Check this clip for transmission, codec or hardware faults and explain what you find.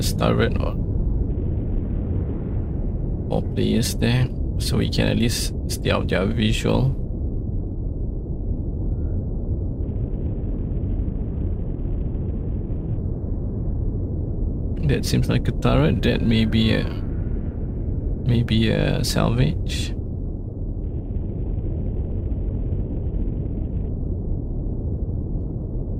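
The clip has one transmission fault, a Bluetooth SBC bit pool drop, heard three times: 1.30 to 2.56 s, 9.82 to 12.97 s, and 20.83 to 23.89 s. Each time the treble dulls and gritty noise appears. That fits the link cutting the bit pool from 28 to 7, near 66 kbps. The top sub-bands then lose their bits, and the rest are coarsely quantised.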